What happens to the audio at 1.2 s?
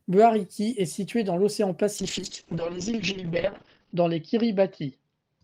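Nothing goes wrong at 1.2 s: the speech carries on intact through that moment, with no dropout, click, distortion or other fault.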